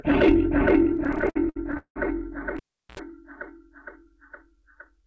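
A recording of everyday sounds, carried over a G.722 call path at 64 kbps, so nothing above 8 kHz survives. Between 0.94 and 1.98 s there are repeated stalls (stutter): fifteen short holds, the longest 180 ms, where the jitter buffer runs dry and the receiver stretches the last sound, fading it in the longer waits. About 40% of that span is concealed, roughly 417 ms, yet nothing is lost; the audio simply drags and judders. From 2.57 to 2.99 s the cable is pulled and plugged in: a pop, about 378 ms of near silence, a 76 ms burst of 60 Hz mains buzz as only the plug tip makes contact, then a second pop when the signal returns.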